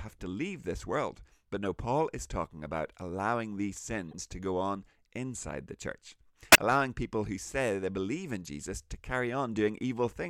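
Corrupt frame decoded at 1.63 s, 4.11–4.15 s (after "talking about allowing these") and 6.52–6.58 s (after "on inside the church"). Damaged compressed frames were decoded anyway, throwing energy onto wrong frequencies as brief chirps, squeaks, blips or bursts of noise. The first two are faint, peaking around -35 dBFS, and the last is much louder, around -10 dBFS.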